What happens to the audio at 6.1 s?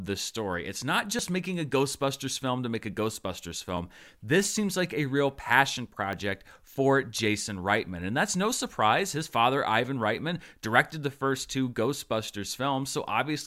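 At 6.13 s the speech jumps. The sound skips forward with no gap of silence. About 10 ms of audio is missing, and the two sides butt directly against each other. The likely cause is a dropped buffer (overrun). The recording software did not collect a block of samples in time. The hardware overwrote that block, so that slice of audio was lost and the stream closed over the hole.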